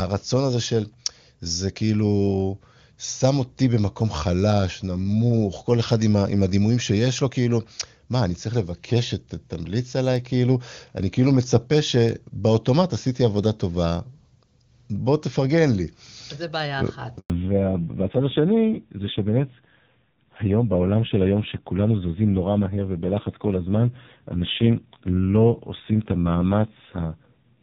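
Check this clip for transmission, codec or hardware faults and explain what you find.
Two faults, both at about 17.2 s: a brief dropout, then a lasting loss of clarity.

From 17.18 to 17.30 s the sound cuts to silence for 120 ms. This is a handover gap: no speech frames arrived while the call switched networks.

From 17.30 s to the end the speech turns dull and raspy, with nothing above 4 kHz. This fallback to narrowband fits a drop from HD Voice around 23.85 kbit/s to AMR-NB near 5.9 kbit/s.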